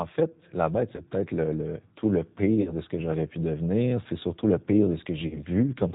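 French speech carried throughout by the G.729 codec at 8 kbit/s, with no content above 4 kHz and a rough, synthetic edge. VoIP packet loss concealed by the speech codec appears at 0.95–1.02 s after "fait la bête", 2.62–2.74 s between "le tout le" and "de ce que j'aurais", and 5.28–5.40 s after "surtout le pire". Each gap is extrapolated into a fading buzz or coloured noise with weak recovery. The gaps are about 20 ms, 40 ms and 40 ms.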